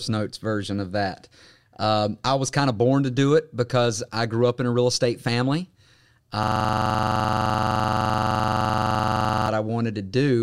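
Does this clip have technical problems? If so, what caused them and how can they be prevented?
Yes. A system hang loop runs from 6.43 to 9.48 s: one 42.67 ms slice, which fits a 2048-sample buffer, repeats identically about 71 times, giving a rough buzz near 23.4 Hz. Unlike an ordinary dropout stutter, every repeat is identical, showing the playback hardware kept cycling a frozen ring buffer. Preventing it means fixing the driver or system stall and having the audio device mute or stop when its buffer stops being refilled.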